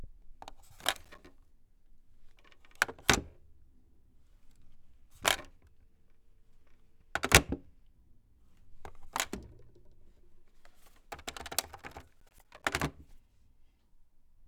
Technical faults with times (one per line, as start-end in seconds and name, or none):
0.84-1.18 processor overload crackle
12.20-12.65 processor overload crackle